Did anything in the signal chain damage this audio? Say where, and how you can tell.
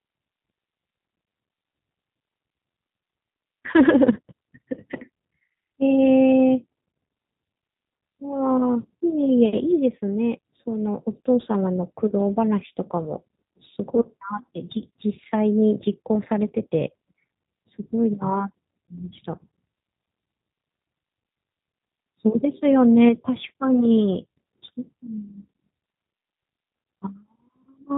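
Yes. At the codec stage, the whole clip is band-limited below 4 kHz with a rough, synthetic texture, which fits an 8 kbit/s G.729 stream rebuilding speech from a filter and pulse model.

At the network stage, VoIP packet loss concealed by the speech codec shows at 1.25–1.27 s, 12.35–12.38 s and 13.95–14.05 s. Around each point the decoder stretched its last frame into a fading buzzy tone or coloured noise, leaving the speech weak for a short stretch afterward.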